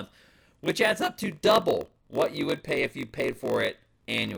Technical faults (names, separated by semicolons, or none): block size mismatch (padded)